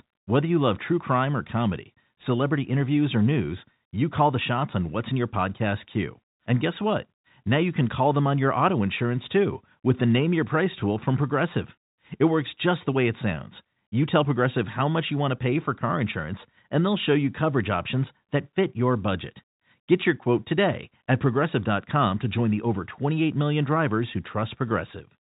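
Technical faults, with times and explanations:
Nothing stood out on listening, with the speech carried over ordinary G.711 telephone coding that passes nothing above about 3.8 kHz.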